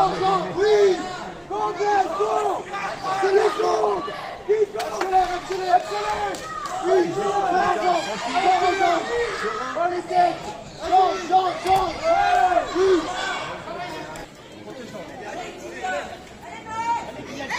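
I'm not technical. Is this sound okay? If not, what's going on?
No. From 1.84 to 5.51 seconds there's a call bitrate drop: the connection briefly gave the call far less data, so the sound turns rough and muffled. Unlike a covered microphone, it clears by itself once the connection recovers.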